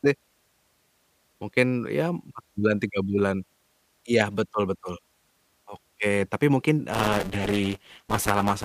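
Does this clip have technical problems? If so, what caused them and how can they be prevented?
Yes. Buffer tearing runs from 6.92 s to 8.65 s as a robotic 200 Hz buzz, which fits a 5 ms buffer period. Writer and reader have slipped, so a bit under half of each buffer repeats sound from about 10 ms earlier, hard-joined on both sides. Keeping the write position locked a safe distance ahead of the hardware read pointer prevents it.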